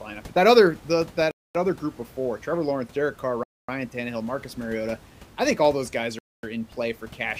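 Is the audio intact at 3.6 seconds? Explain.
No, the speech drops to 250 ms of silence from 3.44 to 3.69 s, then resumes; a Bluetooth stall is the likely cause, with delayed packets draining the headphone buffer.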